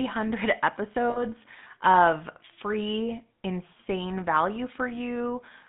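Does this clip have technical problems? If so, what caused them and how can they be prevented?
Yes. The whole clip has the buzzy, gravelly roughness of the GSM full-rate codec, with the band squeezed to roughly 150 Hz to 3.6 kHz. That fits 13 kbps coding that rebuilds speech from a vocal-tract model and a sparse pulse excitation. A wider-band codec avoids it.

From 1.1 to 1.22 s, just before "of free insane value", there are lost GSM frames. For about 60 ms the sound hangs on a rough metallic ring, which fits three dropped 20 ms frames being patched by repeating the last good one. Better link quality or error protection prevents it.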